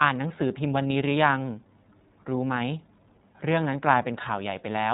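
Speech runs through the iLBC codec from start to finish, and the coding damage is plainly audible as a rough, slightly synthetic edge on every syllable. Each short frame is coded independently, consistent with 30 ms frames at the codec's roughly 13 kbps mode. On a spectrogram everything stops at a hard ceiling near 3.8 kHz with empty space above, while the waveform looks intact but loses fine harmonic detail.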